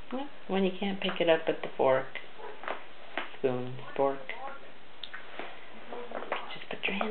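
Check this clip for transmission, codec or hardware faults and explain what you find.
Nothing here points to a transmission, codec or hardware problem; I didn't hear any fault anywhere in the clip.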